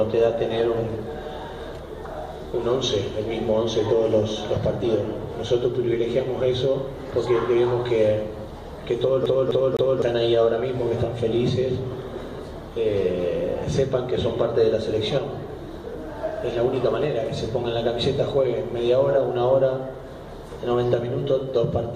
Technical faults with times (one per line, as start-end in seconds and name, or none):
9.26-10.02 CD stuck on one turn